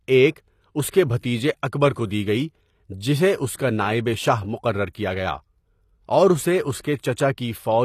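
Throughout, the treble sounds rebuilt rather than real, and nothing is present above 14.9 kHz. Sibilants turn gritty and metallic. This is likely HE-AAC compression at a low bitrate, around 24 kbps.

Pre-echo appears at 1.20 to 1.23 s, after "ایک اس کے"; at 4.93 s, before "کیا گیا"; and at 6.81 to 6.84 s, after "اور اسے اس". Block-spread coding noise leaks ahead of each attack as a brief hiss, softening the onset.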